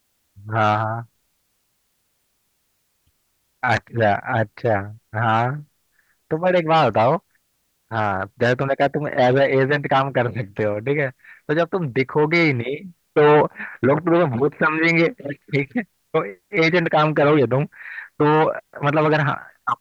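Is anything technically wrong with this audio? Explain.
No, nothing technically wrong stood out on listening to this speech recording.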